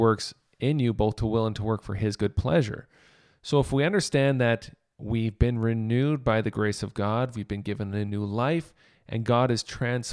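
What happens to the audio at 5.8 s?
At 5.8 s the speech carries on intact, with no dropout, click, distortion or other fault at that moment.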